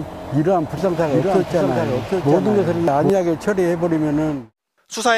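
A doubled audio track runs from 0.78 s to 3.10 s: a second, full-band copy of the sound trails the original by about 0.7 s, sitting roughly 5 dB lower. It carries no decay or room colouring, so it reads as a clean repeat rather than an echo, and it cuts in and out abruptly at those times. The likely cause is the same signal being captured again through a slower path and mixed back in.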